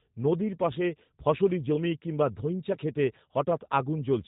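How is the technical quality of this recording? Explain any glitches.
The recording is plainly degraded by low-bitrate speech coding. G.729 codec damage runs through the whole clip. The speech is rebuilt from a vocal tract filter, pitch prediction and a few pulses per 5 ms subframe, which fits an 8 kbit/s coder, and nothing above 4 kHz survives. It sounds clearly rough and synthetic. Unlike simple telephone band-limiting, the buzzy, artificial texture is present and not just muffled.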